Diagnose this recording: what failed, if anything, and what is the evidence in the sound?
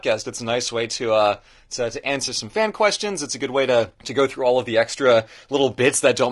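The speech sounds rough and grainy throughout, with noise filling the gaps between harmonics and an artificial-sounding top band. The likely cause is low-delay AAC compression at the codec stage. AAC-ELD's short frames resolve pitch harmonics poorly, and this damage fits a bitrate around 32 kbps.

Between "to uh to to" and "some fan questions", from 2.25 to 2.29 s, there is a brief smeared, noisy patch. This is AAC frame loss with concealment on the network path. Its length suggests a single lost frame, which the decoder refilled from the last good spectrum.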